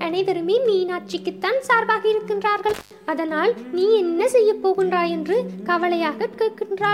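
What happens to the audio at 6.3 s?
Nothing goes wrong at 6.3 s: the audio there plays through cleanly, with no dropout, click, glitch or other fault.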